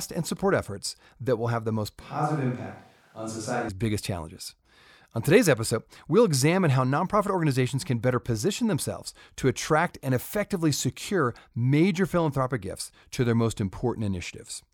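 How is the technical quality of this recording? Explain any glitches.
One glitch stands out. From 2.01 to 3.69 s, after "will have the most", the speech abruptly turns roomy and hollow, thinner in the bass, a few decibels quieter, with faint room noise now audible beneath it. At "biggest challenges" the close, full sound snaps back. This is likely a switch to a distant microphone: the close mic's signal dropped out, leaving a farther pickup that hears more room reflection and less direct sound.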